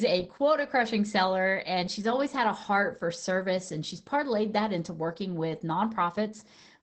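A speech clip carrying Opus voice compression from start to finish: nothing survives above about 9 kHz, which fits the wideband SILK mode, and the coarsely coded excitation makes the voice sound plainly hoarse and faintly robotic, consistent with a rate around 12 kbps. A simple low-pass filter would only dull the top, and transform codecs smear transients into swirly pre-echo. Here the rough, buzzy texture inside the remaining band points to linear-prediction coding.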